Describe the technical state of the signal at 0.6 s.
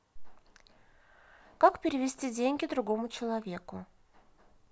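At 0.6 s the speech signal is intact, with no audible technical fault at that moment.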